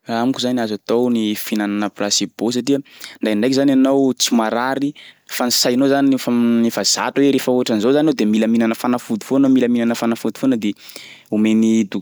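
No technical faults can be heard anywhere in this speech recording.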